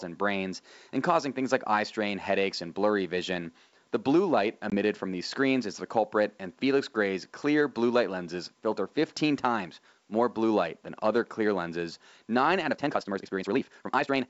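It's a speech clip with two faults worth flagging. Around 4.70 to 4.75 s there's packet loss on what sounds like an ADPCM call: a hard-edged gap of about 20 ms, roughly one packet's worth, filled with silence. Because ADPCM decoding depends on tracking the sender's predictor and step size, losing that chunk throws the decoder out of sync, so when the speech comes back you get a bit of distortion until it re-locks within a few tens of milliseconds. Then from 12.68 s to the end the pace suddenly jumps to about 1.85 times normal speed while the pitch stays put, so it sounds rushed. That's most likely a time-stretched section, with software squeezing the audio to fit a length by dropping short slices rather than resampling. You can hear faint room noise well under the speech, about 44 dB down, and the clean extension up to around 7 kHz with only a faint upper-band hiss points to G.722 wideband telephone coding at its full rate.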